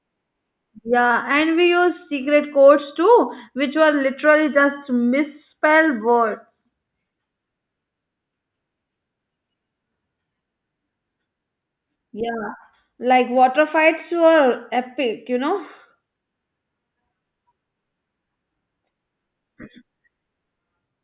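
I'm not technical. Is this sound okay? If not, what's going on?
Yes, no faults to report.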